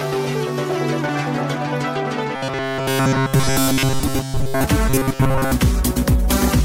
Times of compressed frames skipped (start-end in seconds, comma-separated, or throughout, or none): none